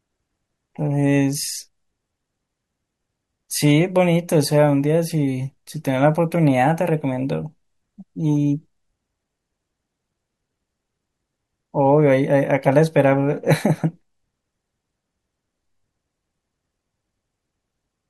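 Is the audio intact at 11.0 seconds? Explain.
Yes, at 11.0 seconds the speech plays through cleanly, with no dropout, click, distortion or other fault at that moment.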